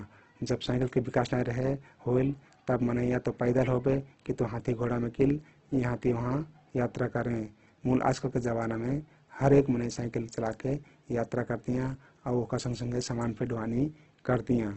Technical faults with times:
0.00-14.77 Opus compression

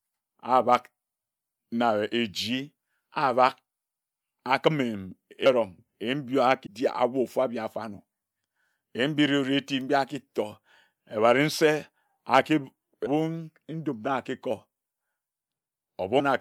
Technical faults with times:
5.45 compressed frames skipped
6.65 compressed frames skipped
13.05 compressed frames skipped
16.19 compressed frames skipped

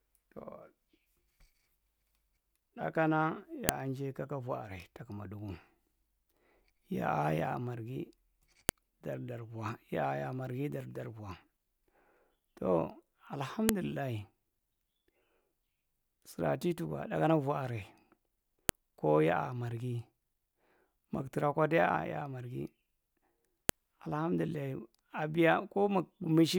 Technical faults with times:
3.69 file header played as audio
8.69 file header played as audio
13.69 file header played as audio
18.69 file header played as audio
23.69 file header played as audio

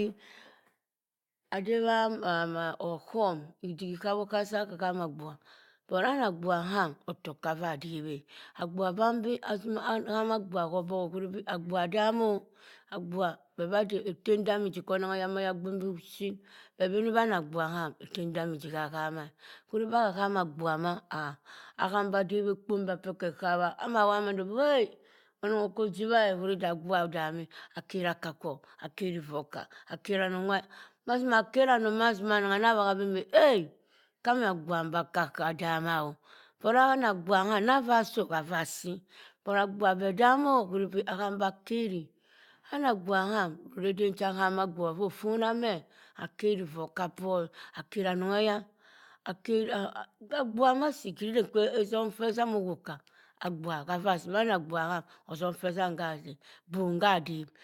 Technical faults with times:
none

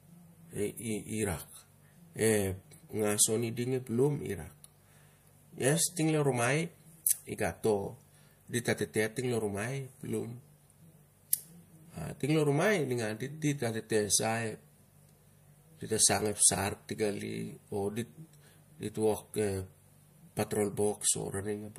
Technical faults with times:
7.04 pre-echo
11.30-11.33 pre-echo

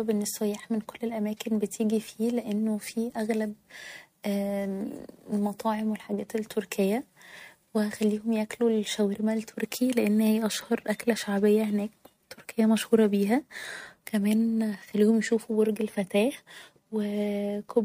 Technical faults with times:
none

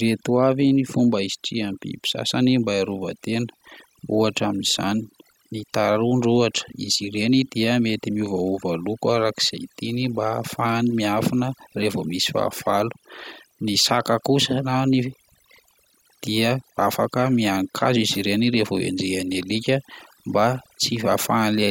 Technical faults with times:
0.00-21.71 overdone noise removal

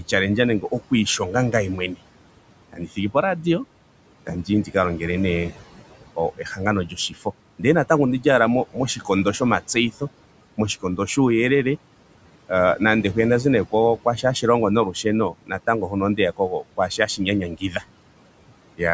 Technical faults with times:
0.00-18.94 noise suppressor artifacts
0.61-1.98 speech cut by the noise suppressor
2.73-3.45 speech cut by the noise suppressor
4.26-10.02 speech cut by the noise suppressor
10.57-11.17 speech cut by the noise suppressor
13.71-17.83 speech cut by the noise suppressor

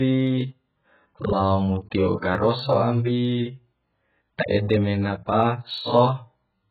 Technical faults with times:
0.00-6.70 AAC compression
0.10-6.68 clock slip clicks

